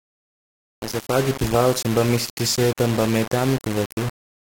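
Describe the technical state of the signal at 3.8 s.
At 3.8 s the speech sounds grainy and gritty, as it does throughout. The likely cause is low bit depth without dither: 4-bit rounding, error about 10 dB below the signal.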